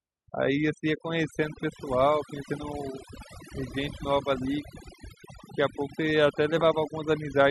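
From start to finish the speech carries overdone noise removal. A noise reducer pushed too hard has cut individual frequency bands whenever their level sat close to its picture of the background noise, taking the softer parts of the voice with them. The gaps between phrases fall to near silence dotted with brief twinkling specks. Unlike a noise gate, which shuts all frequencies together, the damage here is scattered band by band.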